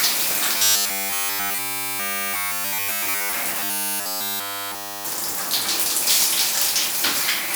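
From 0.57 to 3.34 s, and again from 3.60 to 5.05 s, the sound turns into a rigid, metallic buzz pinned at 100 Hz, with essentially none of the real audio getting through. This is robotic sound from repeated short buffers. The likely cause is new audio arriving too seldom, so the same short slice is looped while the real audio is skipped. A 100 Hz buzz fits a slice about 10 ms long.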